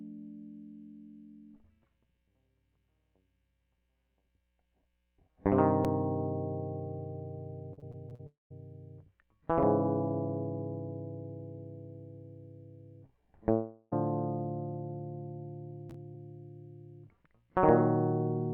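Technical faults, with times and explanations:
7.73–8.21 s, repeated packet loss (robotic sound): five short gaps, the longest 40 ms. Each is patched by repeating the last sound, so the music turns choppy and robotic.
8.27–8.52 s, long network dropout: the last sound stretches into a fading buzz, then about 150 ms of silence. Music resumes with roughly 240 ms missing, likely from lost network packets.
13.52–13.94 s, long network dropout: about 0.4 s of music is replaced by a smeared continuation of the last sound, with no silence. The music returns without that stretch, likely from lost network packets.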